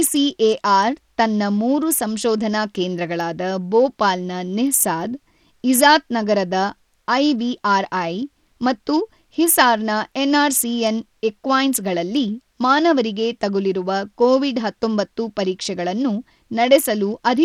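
The encoding chain starved the signal of bits from start to finish: the damage is plainly audible and most likely comes from Bluetooth SBC compression, at a data rate that sounds like roughly 80 kbps. With so small a bit pool, the upper sub-bands get little or nothing and the lower ones are coarsely quantised, so the treble of the speech drops in and out while a gritty, aliased roughness clings to every syllable.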